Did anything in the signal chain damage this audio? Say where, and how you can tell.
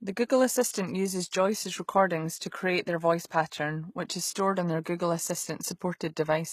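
Yes, and it's the codec stage both times. The whole clip has a synthetic, gritty top end, and the spectrum stops dead at about 14.9 kHz. That points to HE-AAC compression as the likely cause, at a low rate that fits something around 20 kbps. The treble isn't the original. It's been rebuilt by copying lower bands upward under a coarse envelope, so the sibilants come out lispy and metallic, and the damage is plainly audible.

There's also a pre-echo at 3.51 s, right after "to create their voice" and just before "which is stored on". You hear a brief smear of hiss, about 14 ms of it, ahead of the attack, which then lands softer than it should. The codec spread the quantisation noise meant for the loud onset across the whole transform block, so it leaked into the quiet gap before it.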